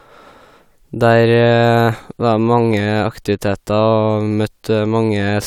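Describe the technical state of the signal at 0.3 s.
At 0.3 s the speech signal is intact, with no audible fault.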